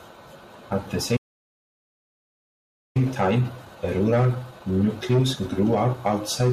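At 1.16 s the speech cuts out in mid-flow and the output stays silent until 2.97 s, a gap of about 1.8 s, before picking up again. This is a playback stall. The likely cause is that the player's buffer ran dry or its audio thread was held up, so nothing reached the output until data started flowing again.

From 2.97 s to 5.97 s the speech sounds rushed, running about 1.1 times normal speed while keeping its natural pitch. This is time-compressed catch-up: having fallen behind during the stall, the player trims its backlog by dropping short slices of audio and cross-fading across the joins. The rushed stretch begins with "outside the".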